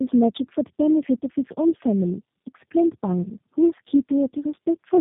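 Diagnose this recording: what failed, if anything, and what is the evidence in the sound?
Throughout the speech the sound is rough, muffled and warbly, with nothing above 3.8 kHz. This is tandem speech coding at the codec stage: the call was decoded and re-encoded at each network border, so every coder worked on the previous one's damage. The layered roughness fits about three low-rate speech codecs in a row, ending in G.729A.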